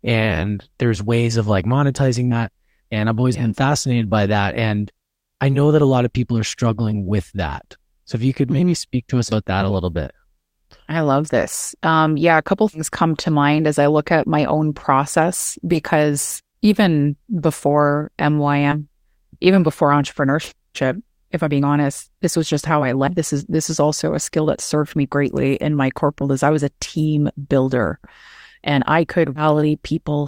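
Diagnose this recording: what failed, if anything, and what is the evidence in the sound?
The codec stage failed: whole compressed frames, about 20 ms each, never reached the output, so the speech jumps forward. Compressed frames were skipped at 2.31 s (after "ways of like monetizing"), 9.29, 12.73, 18.71, 23.07 s (after "was just how I"), 26.21 s (between "me greatly in my" and "as I was a") and 29.35 s. Each skip loses a few frames up to roughly a third of a second.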